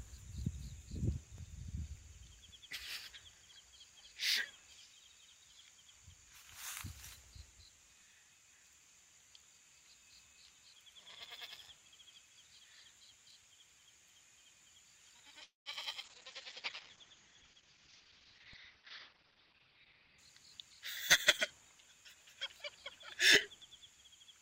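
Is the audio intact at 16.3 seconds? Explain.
No. At 16.3 seconds the audio is inside a call bitrate drop that runs from 16.04 to 20.25 s, about 4.2 s in all. The bandwidth estimate collapsed, so the encoder coded with far fewer bits, which fits a fall from around 128 kbps to around 8 kbps. The coarser coding makes the sound rough and watery, and the audio band narrows from about 20 kHz to 6 kHz, so it also turns muffled until the rate recovers.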